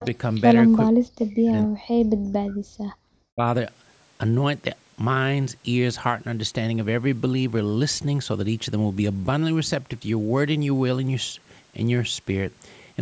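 Speech suppressed in double talk appears first at 0.00–0.05 s, a brief dip of around 10 dB. It returns at 0.91–2.6 s, where the voice dips for about one and a half seconds, dropping by up to roughly 40 dB. A last cut of around 25 dB falls at 3.35–3.43 s. The likely cause is an echo canceller that heard both sides at once, could not tell the talker from the loudspeaker echo, and turned everything down.

Echo leak overlaps the opening at 0.00–0.06 s and recurs at 0.34–0.55 s. A faint, delayed copy of the voice trails 444 ms behind, about 20 and then about 25 dB below the speech. This is likely residual loudspeaker sound that the far end's canceller failed to remove and sent back.

Background gated by the echo canceller occurs at 2.88–3.07 s. The room sound drops out by about 40 dB for roughly a fifth of a second, then returns as the canceller releases its hold on the microphone.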